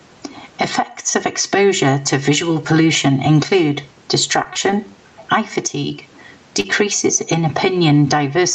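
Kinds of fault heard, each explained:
Channel delay (comb filtering): one channel arrives roughly 3 ms late and the mono sum cancels evenly spaced bands from around 200 Hz, leaving hollow speech and fixed horizontal notch stripes on a spectrogram.
Gain pumping: the level swings by roughly 15 dB, likely from an over-driven input pulled down by a fast limiter, so the waveform envelope looks flattened.
Short stall from a late packet: at 4.43–4.47 s and 4.71–4.74 s, just before "eye fatigue", the last sound is held about 15 ms, showing as a briefly frozen spectral slice.
Short concealed packet loss: at 4.53–4.57 s and 6.60–6.66 s, after "eye fatigue", 20 and 40 ms gaps are filled with continued sound, heard as a smear and seen as a blurred patch.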